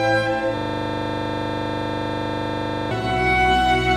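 From 0.57 s to 2.91 s there is a system hang loop. The playback froze while the hardware kept replaying one 40 ms slice of its buffer. That slice repeats dozens of times at 25 Hz. It sounds like a rapid, rattling buzz.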